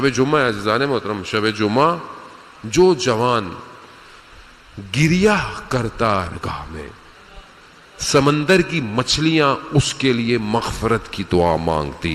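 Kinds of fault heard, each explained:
Skip ahead: About a second of audio was discarded while later material was already queued, likely because the jitter buffer overflowed. At 6.27 s playback jumps straight forward with no gap, and the sound on either side of the missing stretch is butted together abruptly.
Jitter buffer speed-up: The receiver held more audio than its target delay, so it trimmed many short pitch-period slices to catch up. From 8.22 to 9.75 s the sound runs about 7% fast at unchanged pitch, losing roughly a tenth of a second and sounding hurried.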